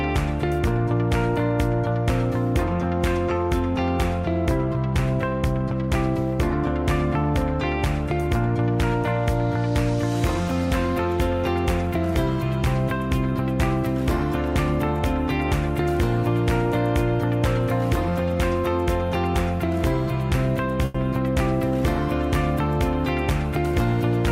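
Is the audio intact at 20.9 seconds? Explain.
No. From 20.85 to 20.96 s there is a short stall from a late packet. A packet arrived after it was due, the jitter buffer ran dry, and the receiver stretched the last sound for about 90 ms until it came. Playback then resumed from the same point, so nothing is lost. Unlike a dropped packet, there is no gap or skipped audio, just a held sound with a slight buzz or dip, and everything afterward plays 90 ms late.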